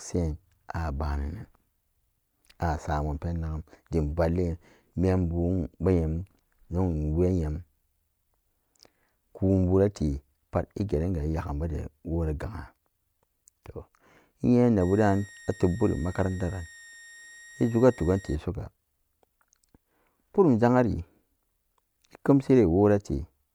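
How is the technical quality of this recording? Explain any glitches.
The recording has one fault, a switching supply whistle from 14.80 to 18.35 s. A thin, high tone sits under the speech, wandering slightly between 1.85 and 1.88 kHz, roughly 25 dB below the speech. It comes from a switching power supply dropping into an audible burst mode or beating against another supply, so its pitch shifts with load. On a spectrogram it shows as a faint, slightly wavering horizontal line for those 3.5 seconds.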